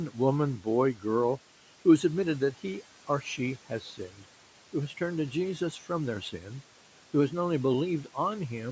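In this speech recording, the noise suppressor misjudged parts of the speech as background noise and pulled them down, leaving sounds swallowed and faint. It happens three times: from 0.58 to 0.67 s, with a dip of about 11 dB; from 0.94 to 1.05 s, about 10 dB; and from 3.69 to 4.22 s, just before "who has turned to," about 9 dB. Each of the early dips hollows out roughly a tenth of a second, and the last one weakens about 150 ms spread across that stretch.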